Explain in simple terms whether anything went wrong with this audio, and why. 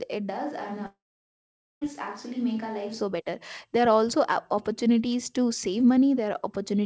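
From 0.32 s to 2.99 s the speech suddenly sounds roomy and hollow, a bit quieter, with more background hiss. This is a switch to a distant microphone, likely because the close microphone dropped out. The clear sound returns at 2.99 s, just before "better there".

Inside that stretch, from 0.86 s to 1.83 s, a long network dropout occurs. Almost a second of audio likely never arrived. A short fading buzz or hiss fills the gap first, then silence. The sound picks up later, with that part gone.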